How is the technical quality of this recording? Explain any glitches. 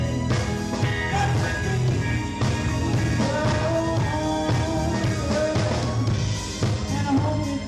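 No glitches or faults detected.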